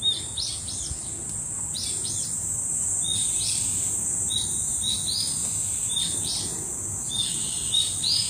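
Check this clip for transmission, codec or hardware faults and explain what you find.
One codec fault runs through the whole clip: the treble is bright but synthetic, and the likely cause is HE-AAC compression at a low bitrate, consistent with about 24 kbps. The codec appears to code only the lower spectrum and rebuild the top by copying lower bands upward under a coarse envelope, so the upper harmonics do not line up with the lower ones. High detail sounds gritty and metallic, and nothing reaches above 15.5 kHz. A plain low-pass filter would sound dull instead, with the treble simply missing.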